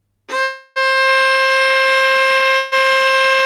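A call audio freeze runs from 0.43 to 0.78 s. The sound stalls and the last moment is stretched into a fading buzzy hiss for about 0.32 s, likely because delayed packets left the jitter buffer empty. The audio then resumes where it stopped, with nothing lost. A second freeze from 2.57 to 2.74 s fills about 0.15 s the same way.

GSM signalling bursts start at 2.16 s and continue to the end. A nearby 2G phone is sending short groups of radio bursts, and the audio circuitry rectifies them into a galloping dit-dit-dit of short 217 Hz buzzes, roughly 25 dB below the main sound.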